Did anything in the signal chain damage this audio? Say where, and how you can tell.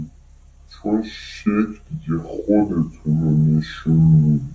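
Yes, there's a wrong sample rate problem at playback, running the whole clip. The speech comes out slow and low, at about two-thirds speed and roughly seven semitones down, which fits 24 kHz material clocked out at 16 kHz with no resampling, so pitch and tempo drop together.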